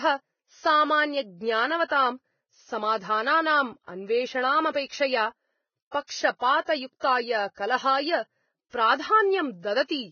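The whole speech clip has a hard ceiling at 6.6 kHz and a hissy, grainy top end where fine detail has turned to noise, with roughened tones. That's heavy damage, likely from Vorbis compression at a low setting, which fits something around 16 kbps.

Then there are two spots of pre-echo, from 6.07 to 6.09 s and from 7.00 to 7.03 s. In each, a brief hiss of roughly 24 and 30 ms runs just ahead of a sharp onset. The codec spread its block noise back into the quiet gap before the attack, so those onsets sound smeared rather than crisp.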